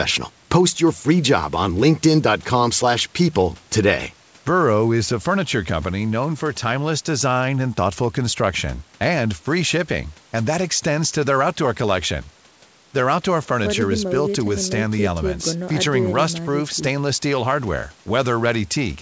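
No faults detected in this speech; the band stops at 8 kHz, consistent with the call's microphone processing and a G.722 call path, both working normally.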